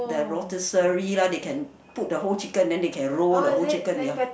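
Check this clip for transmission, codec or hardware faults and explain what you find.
I checked this clip and found no faults to explain.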